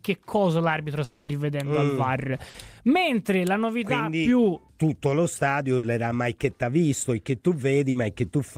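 From 1.04 to 1.29 s, the sound smears into a fading buzz or hiss for about 240 ms before resuming further on. This is likely a long network dropout, concealed throughout.

Bursts of packet loss follow at 2.49–2.55, 5.77–5.84 and 7.90–7.96 s. Each loses 50 to 60 ms, heard as a brief held buzz or fading hiss and a skip forward.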